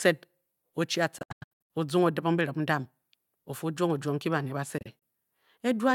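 Between 1.18 and 1.70 s the speech breaks into gaps, about 0.39 s missing in all, the longest 93 ms; from 4.78 to 5.02 s, briefer holes total 70 ms. Speech resumes further along each time, likely a Bluetooth dropout, with late packets discarded.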